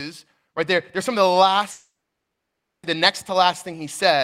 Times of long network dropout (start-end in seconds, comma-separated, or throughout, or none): 1.71-2.85